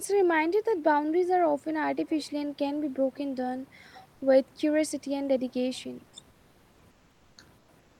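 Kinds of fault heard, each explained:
Speech suppressed in double talk: around 5.95 to 6.08 s the speech dips by roughly 15 dB, likely an echo canceller turning down both overlapping talkers.
Comfort noise in place of the background: at 6.90 to 7.37 s, 7.58 to 7.68 s and from 7.79 s, flat synthetic noise about 2 to 4 dB quieter replaces the room background, likely from discontinuous transmission.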